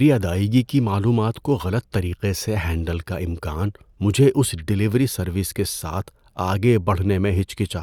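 A short recording of speech, with no technical faults to point to anywhere in it. Nothing stands out as needing attention at any point in the recording.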